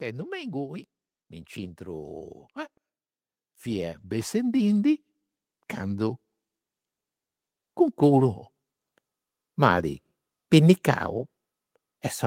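From 1.55 to 2.42 s, automatic gain rising lifts the level by about 4 dB, then again from 3.62 to 5.08 s by about 6 dB, as the gain control judges the input too quiet. Speech and background swell together; the waveform envelope and spectrogram brighten uniformly across all frequencies.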